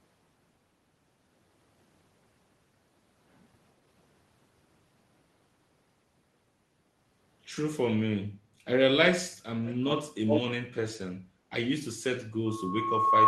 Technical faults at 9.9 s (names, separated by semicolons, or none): echo leak